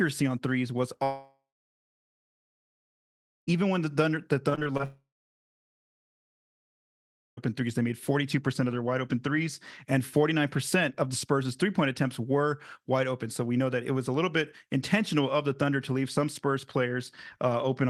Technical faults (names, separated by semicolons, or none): long network dropout; repeated packet loss (robotic sound)